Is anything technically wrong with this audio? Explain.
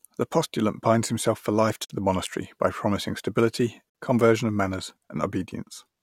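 Yes, there's a gap between chunks, twice. A 50 ms hole opens at 1.85 s, right after "binds himself for life", and again at 3.90 s after "monastery by promising stability". The speech arrives in 2 s chunks with silence inserted at each join, so nothing's lost, but you hear a hard-edged dropout.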